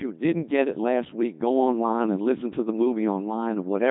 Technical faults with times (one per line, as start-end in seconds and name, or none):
0.00-3.90 Codec 2 vocoder